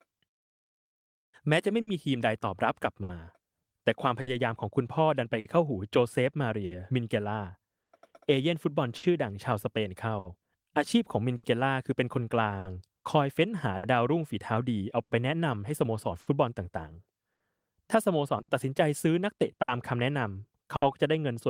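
Clock drift between sender and receiver runs through the whole clip: the sender's clock is roughly 5 percent slow, so the jitter buffer keeps draining and the receiver repeatedly stretches or repeats short pieces of speech. This produces small timing hiccups at uneven intervals.

Scattered short gaps appear from 0.78 s to 20.84 s, where about twenty packets went missing or arrived late. The receiver filled each hole by continuing the previous sound, about a second in total and the longest around 70 ms, leaving brief ticks, smears and hiccups.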